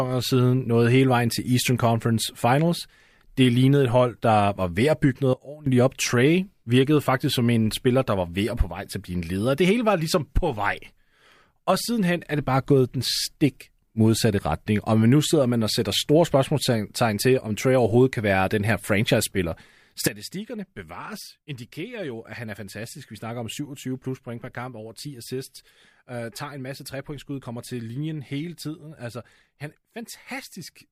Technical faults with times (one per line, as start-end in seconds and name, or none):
5.33-5.66 sudden gain jump
20.07-30.91 sudden gain jump